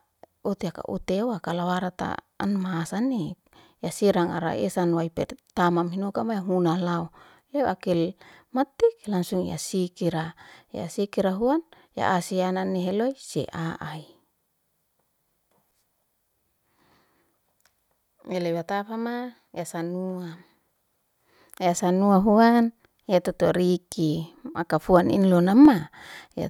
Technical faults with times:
3.98-25.65 clock drift buffer slips

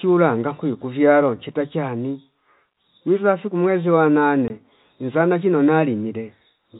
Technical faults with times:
4.48 packet loss filled with silence

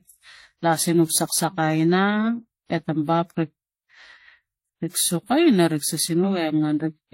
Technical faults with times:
0.00-7.14 transcoding between lossy codecs

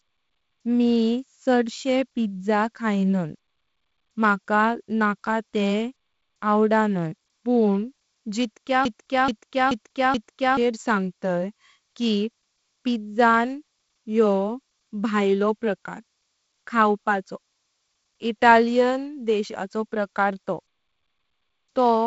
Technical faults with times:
8.85-10.57 broken-record loop

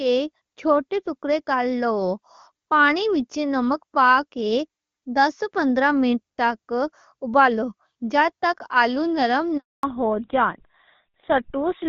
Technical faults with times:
9.57-9.83 handover gap
9.83-11.89 fallback to narrowband

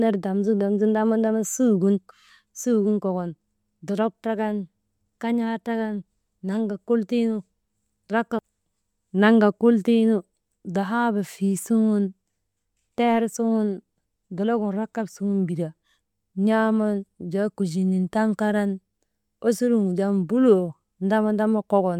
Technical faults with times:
none

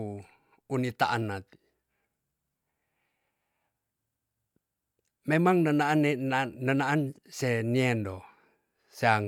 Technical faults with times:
none

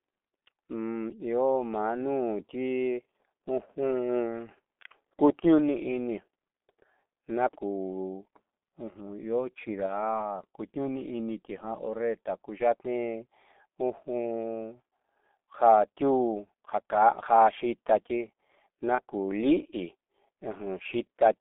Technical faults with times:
0.00-21.40 G.723.1 codec
9.86-9.94 VoIP packet loss concealed by the speech codec
18.95-19.00 VoIP packet loss concealed by the speech codec

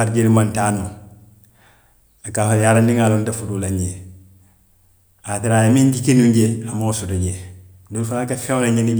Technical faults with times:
none

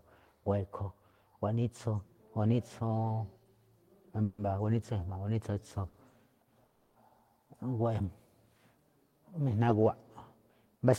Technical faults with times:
4.23-4.40 call audio freeze
5.88-5.95 short stall from a late packet
6.66-6.97 call audio freeze

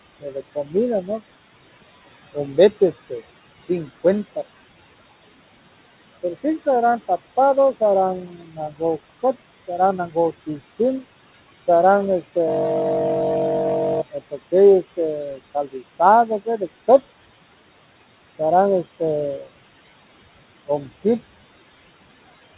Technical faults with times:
0.00-22.57 noise suppressor artifacts
0.20-1.21 speech cut by the noise suppressor
8.23-8.81 speech cut by the noise suppressor
9.67-10.80 speech cut by the noise suppressor
14.12-14.99 speech cut by the noise suppressor
15.32-16.62 speech cut by the noise suppressor
19.38-19.51 speech cut by the noise suppressor
20.67-21.05 speech cut by the noise suppressor

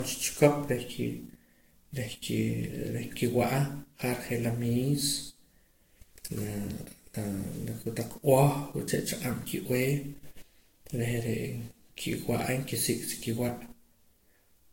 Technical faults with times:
0.00-14.73 generation loss

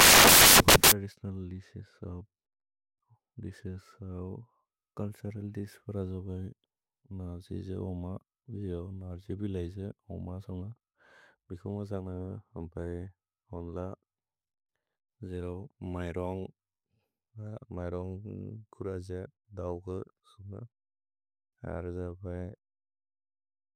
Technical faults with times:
0.00-0.92 samples built from the wrong bytes

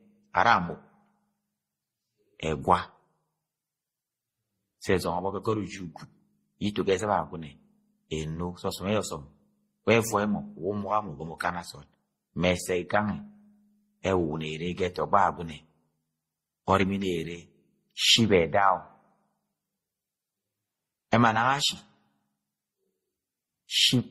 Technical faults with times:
0.00-24.11 transcoding between lossy codecs

